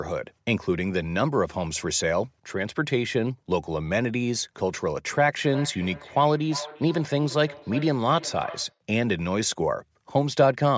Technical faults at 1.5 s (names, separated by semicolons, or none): none